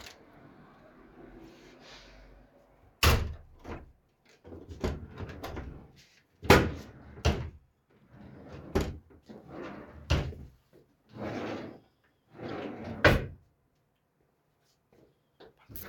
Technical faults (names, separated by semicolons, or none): corrupt frame decoded